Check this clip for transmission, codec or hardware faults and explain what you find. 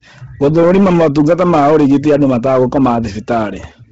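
Two faults run through the whole speech clip: hard clipping and heavy codec damage.

Hard clipping is present from start to finish. The signal is driven about 8 dB past what the chain can carry, so every loud syllable has its peaks sliced flat. Those flat tops add high harmonics heard as a rasping fuzz, and the waveform shows squared-off plateaus on a small but steady share of samples.

Bluetooth LC3 compression is also audible throughout. The speech has a breathy, grainy edge. Content above 7.8 kHz is missing, and much of the band below that is thinned and noise-filled. This is the likely result of LC3 coding at a low rate, which fits roughly 16 kbps with 10 ms frames. On a spectrogram it appears as a hard ceiling at 7.8 kHz, with blotchy, speckled texture beneath it.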